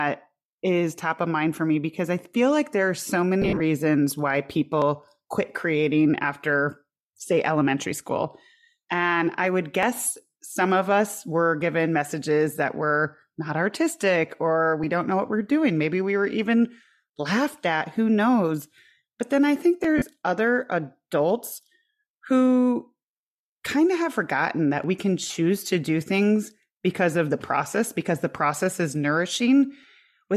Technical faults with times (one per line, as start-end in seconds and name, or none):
3.42-3.61 lost LE Audio frames
4.82-29.83 clock drift buffer slips
19.98-20.02 lost LE Audio frames
25.27-25.30 lost LE Audio frames